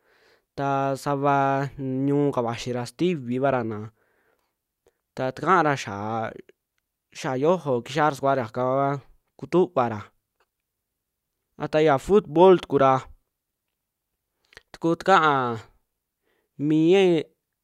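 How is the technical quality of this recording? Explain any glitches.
Nothing stood out as a technical problem while listening to this speech recording.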